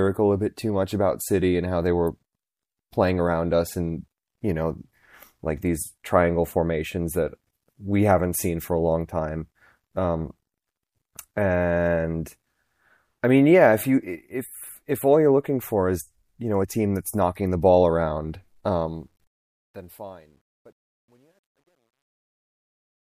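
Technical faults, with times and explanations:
18.64–23.12 s, truncation distortion on a fade: after "knocking the ball around" the fade-out runs out of resolution, which fits an undithered 11-bit path. From 20.0 s the tail turns gritty, with staircase steps on the waveform and broadband grit on a spectrogram.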